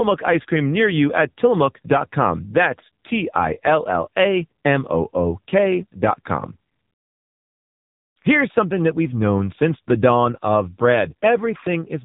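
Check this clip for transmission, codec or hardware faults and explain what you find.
There's one fault, and it runs the whole clip: AMR narrowband mobile codec damage. Nothing above about 3.8 kHz survives, and the heavy buzzy, synthetic edge on the speech suggests one of the low modes, roughly 6.7 kbps, where a few pulses per subframe drive the vocal-tract model.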